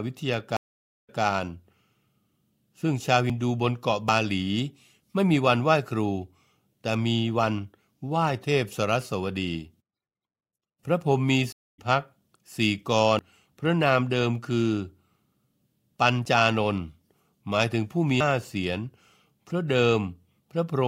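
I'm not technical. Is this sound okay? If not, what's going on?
No. At 0.57 s and 11.52 s the speech cuts to silence for about half a second, then a quarter second. This is a stream reconnect: the connection dropped and restarted, repeating a fraction of a second the first time and skipping ahead about 0.3 s the second.

Small jumps in the speech occur at 3.30, 4.09, 13.19, 16.25 and 18.20 s. Each likely comes from a dropped buffer (overrun), where the computer fell behind and lost about a twentieth of a second, and roughly three times that at 13.19 and 18.20 s.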